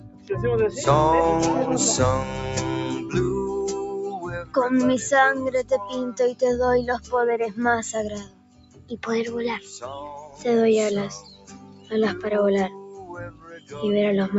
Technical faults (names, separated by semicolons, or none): noise suppressor applied to music or sounds; sound cut by the noise suppressor